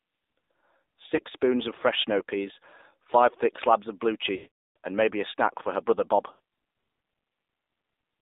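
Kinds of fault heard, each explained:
AMR narrowband mobile codec: The speech has passed through a narrowband mobile codec. It runs at 8 kHz and rebuilds the voice from a vocal tract model fed by a few pulses. Here the line spans roughly 250 Hz to 3.7 kHz, so there is no bass and no top end. The damage is plainly audible. The voice sounds buzzy and synthetic, which fits a low mode near 7.4 kbps.
lost AMR speech frames: Radio errors spoiled some speech frames, so the decoder filled the gaps by reusing the last good pitch and vocal tract settings at falling gain. There is a brief dip at 1.16 to 1.19 s. Around 6.32 to 6.40 s, 80 ms is patched and the sound smears. From 4.36 to 4.76 s, a 400 ms run drags out, fades to silence, then returns weak or rough.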